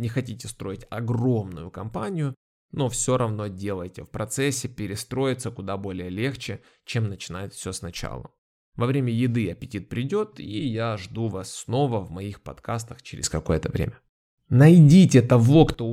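Speech clip with a sudden gain jump at 13.24 s, right after "снова в моих подкастах": level and background noise leap together by about 12 dB until 15.74 s, likely an unramped digital gain change, visible as an abrupt waveform step and brighter spectrogram.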